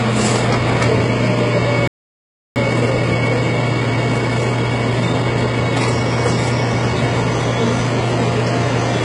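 A recording of everyday sounds carries heavy HE-AAC compression damage throughout, most likely from a very low bitrate of around 12 kbps. The upper range has a gritty, metallic sheen rather than plain dullness, which sets spectral band replication apart from a simple low-pass or an ordinary lossy codec. At 1.88 s the sound halts mid-flow for about 0.68 s, a playback stall, likely from the player running out of data, and resumes at 2.56 s. Because it is full silence, it differs from a dropout that skips material. From 2.56 to 5.56 s a time-compressed catch-up runs the audio about 1.15 times fast at unchanged pitch. Pitch staying put separates it from a sped-up tape or a sample-rate mismatch.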